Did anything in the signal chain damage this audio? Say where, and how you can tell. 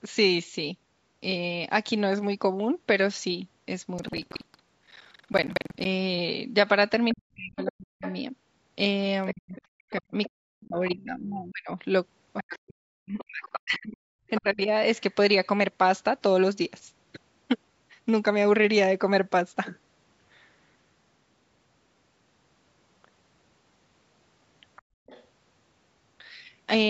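Yes. At the driver or buffer stage, buffer tearing runs from 3.95 to 5.88 s as a steady 21.5 Hz rattle, which fits a 2048-sample buffer. The waveform shows hard seams at that spacing, each splicing in about a fifth of a period of audio from around 200 ms earlier. On a spectrogram these seams appear as regular vertical lines.

In call processing, speech suppressed in double talk dips the talker from 7.13 to 8.04 s and again from 9.33 to 14.7 s. The drops reach about 40 dB, for roughly 0.7 s and roughly three seconds of damage in total. The likely cause is an echo canceller treating overlapping talk as echo. The waveform shows gouged, fragmented speech envelopes.

The other side's voice leaking through appears at 8.05–8.16, 9.26–11.04, 12.37–14.4 and 24.76–25.25 s. It sits roughly 20, 15, 10 and 30 dB below the speech. Those extra harmonic traces on the spectrogram are most likely loudspeaker echo the canceller failed to remove.

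Background gated by the echo canceller drops the room sound by about 36 dB between 24.82 and 25.06 s, lasting about 200 ms. This coincides with the leaked voice, so the canceller clamped the microphone while the loudspeaker played. A spectrogram shows the noise floor going blank, then returning.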